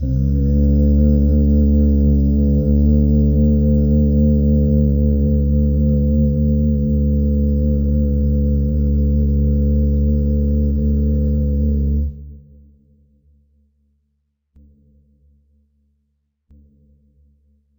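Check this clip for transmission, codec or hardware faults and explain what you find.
One fault runs through the whole clip: stereo read as mono. Interleaved left and right samples play as one channel. So the sound runs at half speed, a full octave low.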